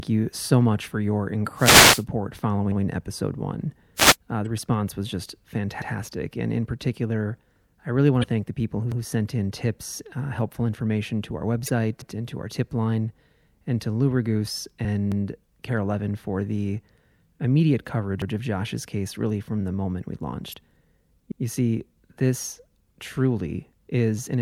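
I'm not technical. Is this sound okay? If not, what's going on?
No, three kinds of fault can be heard.

Wireless microphone noise hit, from 1.56 to 2.04 s and from 3.96 to 4.16 s: the radio link from the microphone briefly weakens, so the receiver's background hiss rises as a short swish of static.

Overlapping chunks, at 2.72, 5.82, 8.92, 12.02, 15.12, 18.22 and 21.32 s: the audio was handled in pieces about 3 seconds long, and each new piece starts a tenth of a second early. That tiny bit plays twice, giving a regular stutter.

Damaged data in a compressed stream, at 4.43 to 4.47, 8.21 to 8.25, 11.65 to 11.70, 14.84 and 20.50 to 20.54 s: bits of the compressed file are corrupted, so the player misreads them and jumps to the next good spot, producing a quick chirp or blip.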